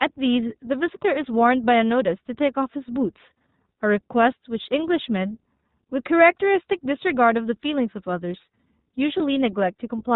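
Throughout, the speech is band-limited with nothing above 4 kHz, and has a plainly audible rough, synthetic edge. That is the iLBC codec, a narrowband VoIP coder whose sound fits its 15.2 kbps mode with 20 ms frames, each coded independently of the previous one.

From 9.18 to 9.22 s the speech briefly turns into a held, slightly buzzy vowel, then snaps straight back. That is lost iLBC frames. The gap fits a single missing 20 ms frame, which the decoder filled by repeating the last pitch cycle mixed with noise.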